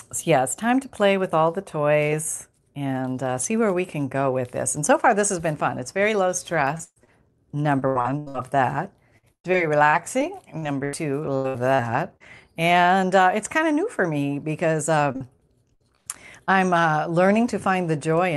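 At 6.77 to 6.81 s there is a short concealed packet loss. About 20 ms of the speech never arrived in time. The decoder extended the preceding sound to cover the hole and then blended back. It is heard as a brief smear.

Right after, from 6.83 to 6.98 s, comes a burst of packet loss. About 120 ms is missing. The receiver held the last sound and let it decay, and roughly 40 ms of that stretch drops to silence. You hear a short held buzz or fading hiss before the speech resumes further along.

A second short concealed loss follows at 7.04 to 7.09 s. About 33 ms is patched over, leaving a quick wobble.

Repeated packet loss (robotic sound) then takes over in three stretches. From 7.79 to 8.36 s there are five gaps, the longest 80 ms, and nearly half the span is concealment. From 9.18 to 12.22 s there are eleven gaps, up to 112 ms, covering about a fifth of it. From 15.12 to 16.61 s there are seven gaps, up to 100 ms, again about a fifth. 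Each hole is bridged by repeating the last sound, and the next one arrives soon after. The result is choppy speech with pieces missing.

All of this passes through an Opus call path whose audio band stops near 12 kHz.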